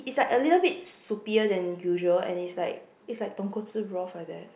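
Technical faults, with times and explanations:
No technical faults are heard in this speech clip.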